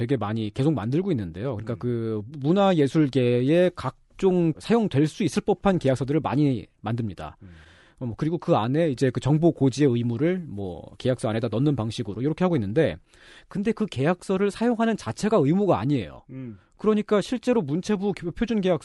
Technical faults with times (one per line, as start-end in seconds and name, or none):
none